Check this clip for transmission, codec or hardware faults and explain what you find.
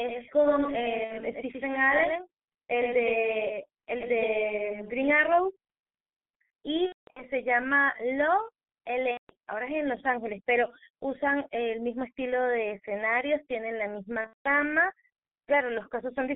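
Three kinds of fault are present: heavy G.723.1 coding throughout, a doubled audio track early on, and four bursts of VoIP packet loss concealed by the speech codec.

The G.723.1 codec damage runs through the whole recording. At about 6.3 kbit/s with 30 ms frames, the codec keeps only a 150 Hz to 3.5 kHz band and updates its voice model slowly. The speech is muffled and hoarse, and consonants are blurred. A spectrogram would be empty above 3.5 kHz, with harmonics smeared into blocky 30 ms steps.

A doubled audio track is already under way at 0 s and stops abruptly at 5.1 s. A second full-band copy trails the original by roughly a tenth of a second and sits about 5 dB lower. The likely cause is the same signal arriving a second time by a slower path. It has no room decay, so it sounds like a dry slapback. The waveform would show each envelope repeated, slightly smaller, just behind.

VoIP packet loss concealed by the speech codec occurs at 1.04 to 1.15 s, 6.86 to 7.24 s, 9.11 to 9.35 s and 14.21 to 14.48 s. 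The missing stretches last 60 ms, 270 ms, 180 ms and 210 ms. The second and fourth are broken gaps, with longest runs of 210 ms and 180 ms. The first fits two lost 30 ms frames.

In each gap the decoder extends its last pitch and filter while lowering the gain. That turns the speech into a fading buzzy tone or coloured noise, which is muted from the third lost frame in a row. The speech stays weak or distorted for a moment after packets resume. On a spectrogram, the harmonics run flat and unchanging into each gap, thin out as the level falls, and go silent in the longer runs.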